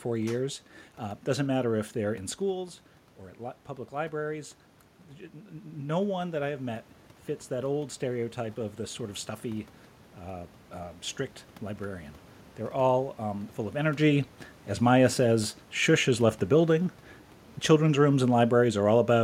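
Speech recorded with audible room noise, where automatic gain rising runs from 3.94 to 12.08 s: after the level drops about 9 dB, the AGC lifts gain about 7 dB, swelling voice and background together. The drop follows the talker moving around 2.5 s.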